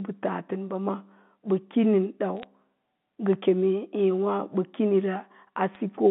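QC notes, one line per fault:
2.40 to 2.46 s and 5.75 s: bit errors on a digital phone line. Single samples on the G.711 mu-law line were corrupted. Flips in sign or high bits throw samples far off, so each gives a click.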